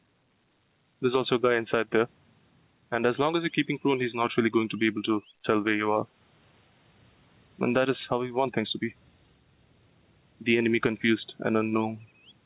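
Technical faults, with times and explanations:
Throughout, gain pumping: the gain swings by around 10 dB, so everything sounds squashed together. Likely the mic gain is far too high, with a fast limiter pulling it down on each peak.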